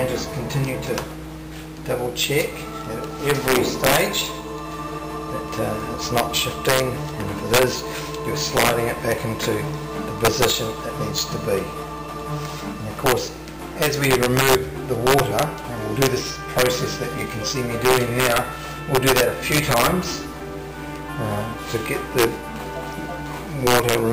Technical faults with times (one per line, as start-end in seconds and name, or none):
0.00-24.13 mains hum
0.00-24.13 integer overflow